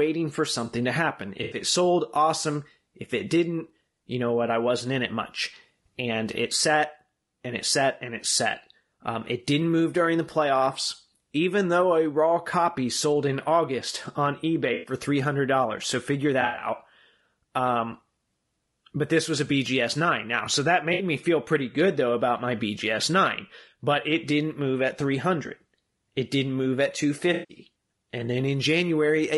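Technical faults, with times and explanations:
Throughout: low-delay AAC compression. The speech sounds rough and grainy, with noise filling the gaps between harmonics and a thin, synthetic top band. This likely comes from AAC-ELD at 32 kbps, whose short frames resolve pitch harmonics poorly and leave too few bits.
1.43–1.57 s: AAC frame loss with concealment. Between "for something to happen" and "it sold awesome" comes a smeared, phasey patch of about 80 ms. The decoder lost audio and filled the gap by reusing the last good spectrum.
14.73–14.93 s: AAC frame loss with concealment. A noisy, smeared stretch of about 120 ms, because the decoder kept extrapolating from stale data.
16.41–16.67 s: AAC frame loss with concealment. Scattered dropouts totalling about 140 ms, spread over 200 ms with the longest run roughly 70 ms, give a smeared, phasey texture as the decoder repeatedly patches small gaps from earlier spectra.
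20.93–21.03 s: AAC frame loss with concealment. A brief smeared blip of about 60 ms just before "me feel pretty good", where a short run of lost audio was filled with a noisy copy of the preceding spectrum.
27.33–27.57 s: AAC frame loss with concealment. Right after "didn't move at", a 160 ms hole is filled in, because the decoder reused the last good spectrum.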